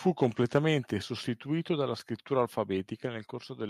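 Speech, with a brief burst of harsh crackle from 0.22 to 0.26 s where the loudest peaks are flattened, roughly 3 percent of samples, overshooting by about 1 dB. It is likely microphone overload: input gain set too high, driving the converter into clipping.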